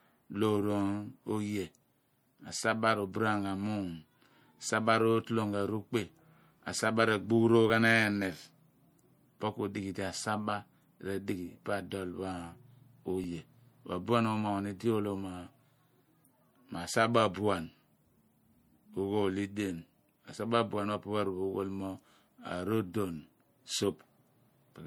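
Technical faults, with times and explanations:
Throughout, MP3 compression: the speech has a plainly audible watery, swirly texture, with s sounds turning chirpy and metallic as weak frequency lines flicker on and off between frames. That's likely a lossy encoder starved of bits, which fits something like 64 kbps.
7.7 s and 13.24 s, dropped buffer (overrun): each is a small jump in the speech, no gap of silence. About 5 ms of audio goes missing, likely because samples weren't collected before the hardware overwrote them, so the two sides are butted together.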